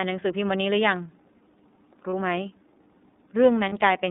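The whole clip runs through the iLBC codec: speech squeezed into roughly 200 Hz to 3.7 kHz, audibly rough and synthetic, consistent with its 13.33 kbps, 30 ms-frame mode. At 2.10 s and again at 3.69 s you get lost iLBC frames, each about 30 ms, where the decoder repeats the last pitch cycle into a brief buzzy, held vowel before snapping straight back.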